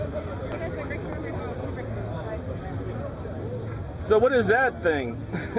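At 0.52 to 0.54 s the sound makes a skip ahead: about a second of audio is dropped and playback jumps straight to later material with no fill between the two sides. The join is abrupt, and anything from that missing stretch is simply gone.

From 0.62 to 1.48 s a jitter buffer speed-up follows. The buffer, overfull, trims short pitch-period pieces repeatedly, removing about a tenth of a second. The sound runs at 113% speed with unchanged pitch, audibly hurried, over the G.711 A-law path's 4 kHz band limit.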